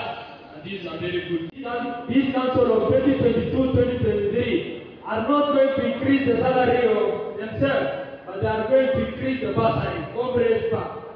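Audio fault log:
No technical faults can be heard anywhere in the audio, and nothing breaks into the signal.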